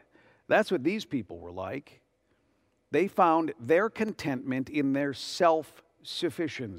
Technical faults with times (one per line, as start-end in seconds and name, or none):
0.69-5.78 clock drift buffer slips